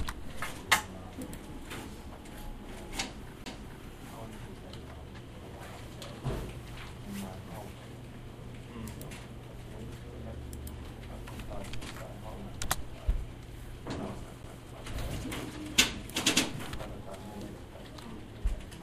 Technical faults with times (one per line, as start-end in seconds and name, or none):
3.44-3.46 CD skip
14.43 CD skip